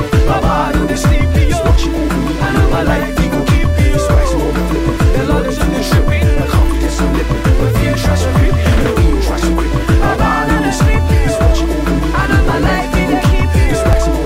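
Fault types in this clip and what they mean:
Audio missing between chunks: two brief skips, at 10.94 s and 13.93 s, each dropping about 10 ms, with the surrounding audio joined directly and no gap of silence. The 3 s spacing likely reflects audio lost where one processing chunk ends and the next begins.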